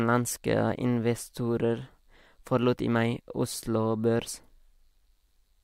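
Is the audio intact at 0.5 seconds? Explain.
Yes, the speech at 0.5 seconds comes through intact, with no dropout, click, distortion or other fault at that moment.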